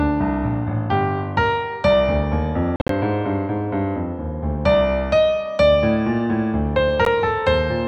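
Bluetooth dropouts at 2.76 to 2.90 s and 7.05 s: the first cuts about 107 ms of audio in holes spread over 133 ms, the longest 53 ms; the second is a single 13 ms gap. The audio resumes as if it had played on, likely from packets arriving too late.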